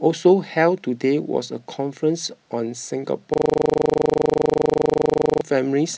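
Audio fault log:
3.34–5.41 s system hang loop: a steady 25 Hz buzz as one 40 ms slice repeats about 50 times, because the driver froze while the hardware kept cycling its buffer.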